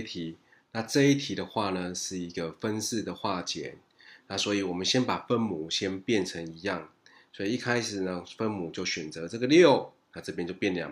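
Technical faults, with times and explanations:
No technical problems can be heard anywhere in the signal.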